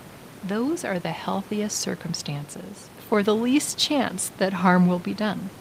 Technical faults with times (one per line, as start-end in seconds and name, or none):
none